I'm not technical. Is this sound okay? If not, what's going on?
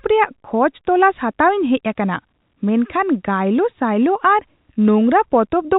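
Yes, the speech is technically fine: it was sent through standard G.711 telephone coding, so it has the slightly narrow, phone-call sound you'd expect from an ordinary landline.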